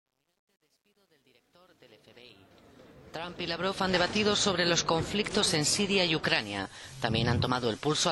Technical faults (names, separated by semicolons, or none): truncation distortion on a fade